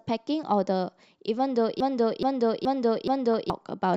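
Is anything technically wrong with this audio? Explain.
Yes, there are two faults in this speech clip.

From 1.80 s to 3.50 s there is a broken-record loop. A fragment about 424 ms long plays four times back to back, identical each time, and whatever should have followed is missing. The likely cause is that the player or stream stalled and kept resending the last buffer it held. Unlike a stutter or dropout, it doesn't skip or go silent. The repeats are exact copies, so the rhythm becomes mechanical.

At 3.34 s, near the end of the loop, there is a brief burst of DAB burbling. It is a few short watery blips on top of the sound, which points to a few damaged audio frames at a very low bit error rate, roughly a tenth of a percent. Errors that get past the error correction corrupt sample values and scale factors, so individual frequency bands jump in level for a frame. That band-by-band warbling sets it apart from a plain click, which is a single broadband tick.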